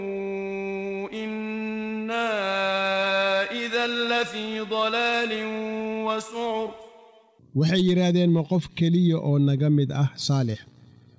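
There are no technical faults to describe in time order; the sound simply comes through a G.722 call path that carries nothing above 8 kHz.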